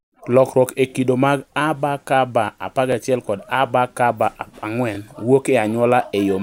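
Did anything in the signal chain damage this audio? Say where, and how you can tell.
Yes. Brief stutters at 0.90, 2.92 and 4.95 s, the first just before "kido mag", come from overlapping chunks: every 2-second buffer join replays 23 ms.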